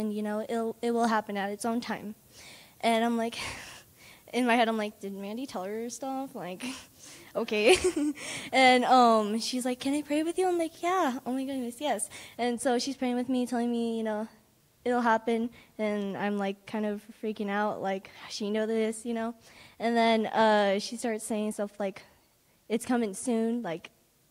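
From the start to about 12.37 s, pre-emphasis is left on. The treble was lifted by the CD 50/15 µs curve, but the matching de-emphasis was never applied. So the top end stays too strong. Around 10 kHz it sits about 8 dB above the level at 1 kHz. The result sounds thin and bright. Sibilant sounds hiss and spit. The low and middle range feel weak beside the exaggerated highs.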